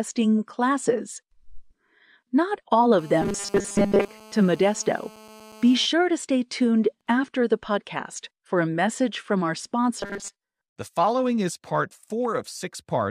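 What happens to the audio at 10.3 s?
At 10.3 s the speech is in the middle of a stretch of robotic sound from repeated short buffers, running from about 9.99 to 10.39 s. The voice turns into a rigid, metallic buzz fixed at 200 Hz, still loosely tracking the speech. The likely cause is audio arriving too slowly, so a tiny chunk, around 5 ms to match that 200 Hz buzz, is replayed over and over, replacing most of the real audio in that span.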